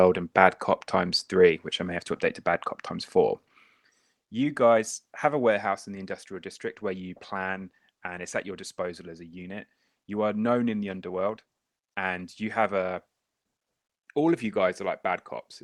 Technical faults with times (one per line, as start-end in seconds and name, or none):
none